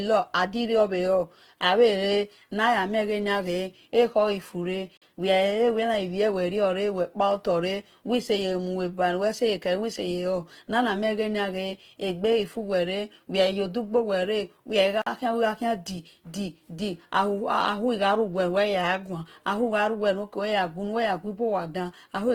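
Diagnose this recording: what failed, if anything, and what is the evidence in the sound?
Two separate problems, one at the codec stage and one at the chunking or playback stage.

The speech has a rough, grainy texture all the way through. The sound breaks up into noisy fuzz instead of staying clean, while the top end still reaches up to about 20.2 kHz. That combination likely points to Opus compression in its music (CELT) mode at a low rate, something like 16 kbps. With bits that scarce, the encoder keeps each band's energy but refills the detail with folded or noise-like content, so the damage sounds gritty rather than dull.

The second fault is a gap between chunks. There are two short dropouts, from 4.97 to 5.02 s and from 15.02 to 15.07 s, each lasting about 48 ms. They fall ten seconds apart, which fits the audio being stored or streamed in 10-second chunks. Each join gets a slug of silence, probably from padding or a player that starts the next chunk late. 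Nothing goes missing, but the flow gets chopped at every boundary.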